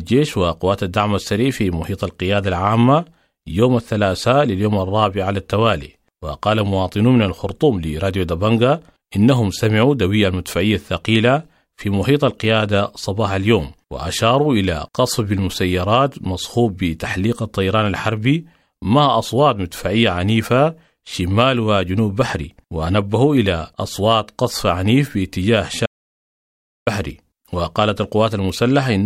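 From 25.86 to 26.87 s the speech cuts to dead silence for about a second, an audio dropout to silence, likely from input briefly lost while zeros were written.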